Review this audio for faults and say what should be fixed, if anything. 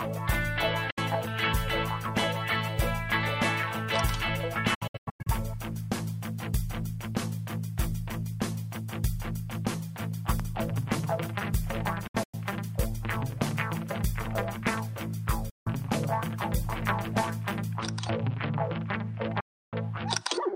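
The digital receiver lost its signal, or frames failed their checksum, and it muted until good frames returned. This causes the digital broadcast dropout: five silences, each cutting in and out with a fade of about 8 ms. The first is a single short gap at 0.90 s, about 64 ms long. From 4.74 to 5.27 s and from 12.07 to 12.34 s the loss is broken into several short holes, the longest about 96 ms. Solid mutes follow at 15.50 to 15.67 s and 19.40 to 19.74 s. Lost stretches come in multiples of 32 ms, which fits a 32 ms frame size. The sound sent during these gaps is gone. Better antenna placement or a stronger received signal would prevent it.

An electrical switching spike sits at 10.40 s. It is a sharp snap or tight cluster of clicks lasting about a millisecond, laid on top of the sound. The likely cause is a nearby switch, motor or static discharge arcing, with the audio line picking it up. 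Shielded, properly grounded cabling routed away from switched loads would prevent it.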